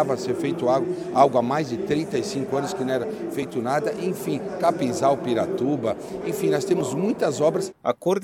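Damaged data in a compressed stream corrupts the encoded frames at 3.42 s and again at 6.81 s. The decoder misreads those bytes and loses sync while it hunts for the next valid frame header, so each point produces a brief glitch in the sound, such as a chirp, squawk, click or short hole.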